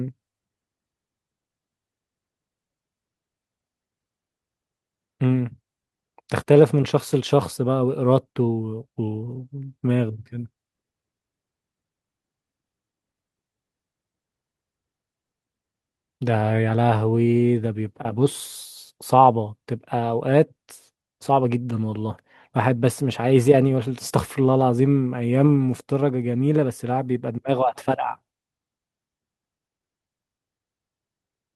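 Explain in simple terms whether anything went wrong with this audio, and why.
Nothing went wrong here.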